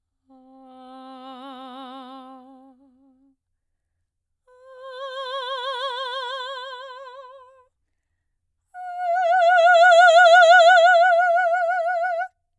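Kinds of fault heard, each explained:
No technical faults detected on this music clip.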